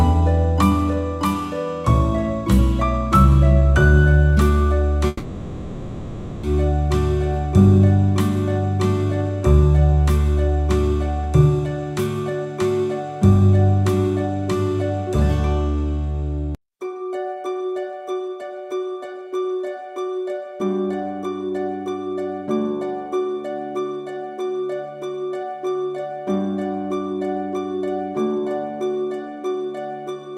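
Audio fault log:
5.07–6.46 s, long network dropout: the sound turns into a buzzy, fading continuation of its last moment. It then resumes with 1.36 s of material gone, likely from stalled packet delivery that the receiver papered over.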